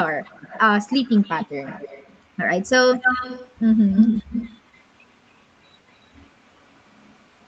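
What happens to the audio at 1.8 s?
At 1.8 s an echo leak is under way. It runs from 0.86 to 2.21 s. A faint delayed copy of the speech trails the original by about 270 ms. It sits roughly 20 dB below the direct voice, so it sounds like a quiet repeat of the voice coming back behind it. The likely cause is a far end playing the call on a loudspeaker, where the echo canceller missed part of what its microphone picked up and sent it back.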